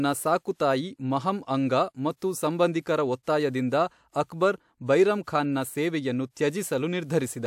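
A short hiss rises out of the silence at 2.16 s and lasts to about 2.22 s in this speech clip, just ahead of a sharp onset that lands softened and smeared. This is pre-echo: the transform codec spread quantisation noise across its whole block, so noise scaled for the loud attack leaked into the quiet 57 ms before it.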